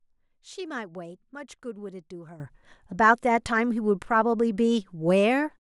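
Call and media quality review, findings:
Sudden gain jump at 2.4 s: speech and background noise step up together by about 15 dB and stay there. Likely an unramped digital gain change.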